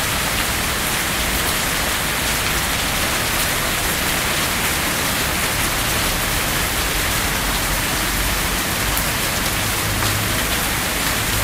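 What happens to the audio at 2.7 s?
At 2.7 s you're near the end of a jitter buffer speed-up running from about 2.1 to 2.8 s. The receiver trims tiny pitch-period slices over and over to drain excess buffered audio, roughly 50 ms in total, so the sound plays about 7% fast at unchanged pitch.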